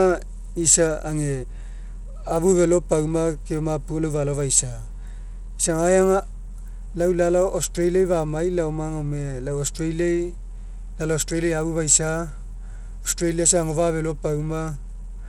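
Across the whole speech clip the treble flickers and thins, with a gritty grain and aliasing riding on the sound and nothing above 19.5 kHz. This is likely Bluetooth SBC compression, its coarse sub-band quantisation starving the top bands, which fits a low bitrate near 96 kbps.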